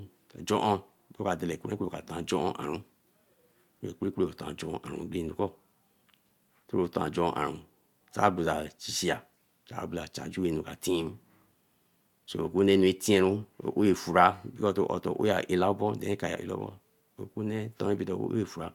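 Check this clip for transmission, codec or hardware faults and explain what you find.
One fault runs through the speech: clock slip clicks from 0.16 s to 18.73 s. A faint, evenly spaced ticking recurs roughly every 70 ms and is clearest on louder, sustained sounds. The likely cause is two devices running on unsynchronised clocks, dropping or repeating a single sample each time the drift reaches a whole sample. That rate fits an error of around 300 ppm. The steady rhythm separates it from packet-loss clicks, which fall irregularly.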